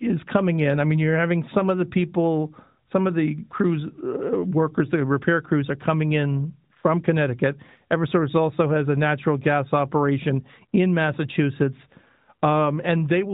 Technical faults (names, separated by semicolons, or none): none